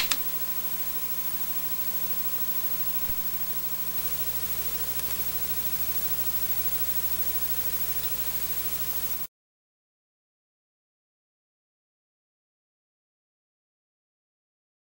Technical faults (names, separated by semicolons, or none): doubled audio track